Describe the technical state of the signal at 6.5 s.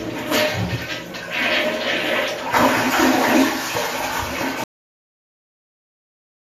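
At 6.5 s the signal is dead silent, inside a cut-off end that begins abruptly at 4.64 s and runs to the close of the clip at about 6.55 s. The final stretch of buffers was never written out, so the sound stops mid-event with no natural decay. On a waveform the trace collapses from full activity to a flat silent line in a single step; a spectrogram shows every frequency band ending along one sharp vertical edge, followed by uniform blank space.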